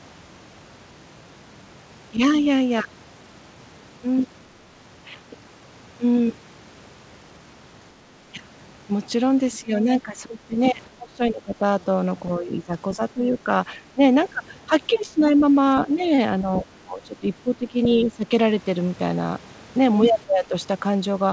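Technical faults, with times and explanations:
2.16–2.21 s, 9.6–11.63 s, 12.38–13.99 s, 14.67–18.26 s and 20.26–20.54 s, speech suppressed in double talk: the speech dips and thins in pieces. The two brief ones at 2.16 s and 20.26 s sink only about 5 dB. The long stretches lose up to about 20 dB around 9.6–11.63 s and about 15 dB in the other two, gapping for roughly 0.7 to 1.5 s in total each. This is likely an echo canceller turning down both its own talker and the far end's echo while both sides spoke at once.
17.83–17.87 s, other side's voice leaking through: a short scrap of a second voice, sitting about 15 dB under the speech, surfaces inside the 14.67–18.26 s suppressed stretch. It is likely residual loudspeaker echo of the far end that the canceller failed to remove from the microphone. The scrap stays band-limited like everything else here, with nothing above 8 kHz, as the wideband call codec allows.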